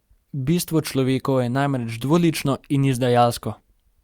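No technical faults can be heard anywhere in this speech recording.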